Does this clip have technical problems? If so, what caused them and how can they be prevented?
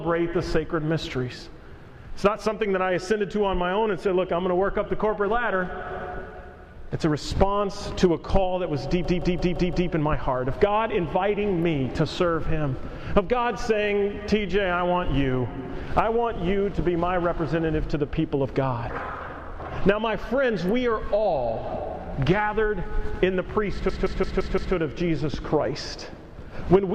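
Yes. A system hang loop at 9.05–9.90 s and 23.89–24.75 s: a 171 ms slice repeats five times, a stutter at about 5.9 Hz that fits an 8192-sample ring buffer replaying while the system froze. Preventing it means fixing the driver or system stall, for example with updated audio drivers and fewer competing real-time loads.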